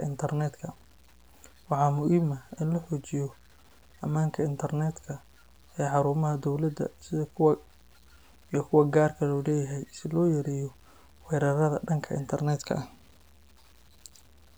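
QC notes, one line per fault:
throughout: low bit depth without dither. Grainy distortion tracks the speech, roughest on quiet syllables and decays. Unlike steady noise, this grit about 35 dB down moves with the signal, likely truncation to around 9 bits.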